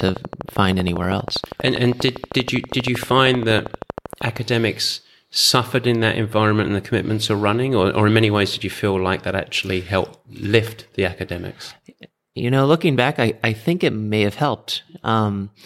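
From 0.01 to 4.38 s a train of clicks runs over the speech at a regular 12.6 per second, about fifty in all, peaking roughly 10 dB above the signal. The evenly spaced, closely matched pulses point to likely interference from nearby equipment or a faulty connection or power supply.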